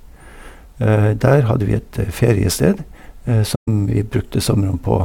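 At 3.55 s the speech drops into silence until 3.68 s, a hole of about 128 ms consistent with AAC frame loss with muting. The decoder received nothing for that stretch, which fits roughly six lost frames, and filled their spectrum with zeros. The overlapping transform windows taper the sound down going in and back up coming out, so the gap has soft edges. That smooth fade sets it apart from a hard sample-level dropout.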